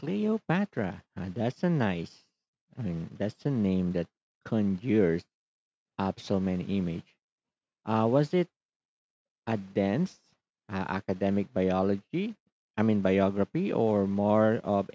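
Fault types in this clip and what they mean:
No fault types in this clip.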